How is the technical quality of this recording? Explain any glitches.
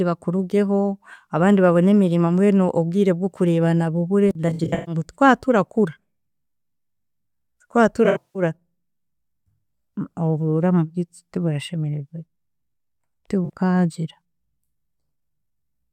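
AAC frame loss with concealment mars the speech three times: 4.49–4.95 s, right after "mbwenu obwire bw’okurebana bubure"; 8.05–8.42 s; and briefly at 13.45–13.50 s. The decoder rebuilds the missing frames from the last good spectrum, so these patches sound smeared and phasey. A spectrogram shows them as blurred streaks without clear harmonics.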